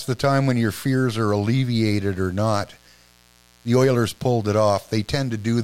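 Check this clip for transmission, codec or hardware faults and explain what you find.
A mains buzz from a 60 Hz supply runs under the speech for the whole clip. Switching spikes twice per cycle add harmonics into the kilohertz range, heard as a raspy buzz well below the speech.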